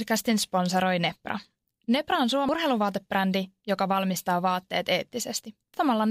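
At 2.49 s and again at 5.74 s the speech is broken by a brief glitch, the sign of damaged data in a compressed stream. Corrupted bytes make the decoder misread the frame there, lose sync and hunt for the next valid header, so the audio at that point is mangled or skipped. Unlike a plain dropout, it comes from the decoder losing its place in the stream.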